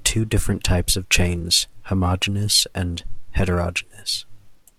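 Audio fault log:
Throughout: periodic clock jitter. Interference near 1 kHz is shaking the converter clock, so each component of the speech gains sidebands about 1 kHz above and below it, strongest on the higher frequencies. It is heard as a rough, metallic edge that disappears in pauses. On a spectrogram, parallel copies of the harmonics sit about 1 kHz away, and they are absent in silence.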